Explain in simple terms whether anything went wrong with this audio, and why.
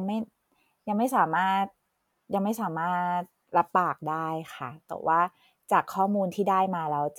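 Nothing went wrong with this audio; every part of the recording is heard as it should be, with no faults to explain.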